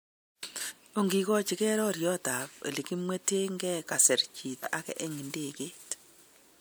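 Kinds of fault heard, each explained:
Compressed frames skipped: whole blocks of the coded speech never play, so the audio leaps forward, about a fifth of a second lost near 0.68 s and a shorter jump after "elekimwetenke kasir" at 4.53 s.
Corrupt frame decoded: one damaged frame near 5.51 s was decoded anyway, spraying energy into wrong frequencies as a brief spurious sound peaking around -30 dBFS. Unlike a skip, no time is lost; the speech runs on in time with a foreign sound laid in.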